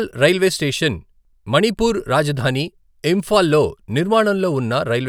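No technical faults can be heard anywhere in the speech; the signal stays steady and continuous throughout.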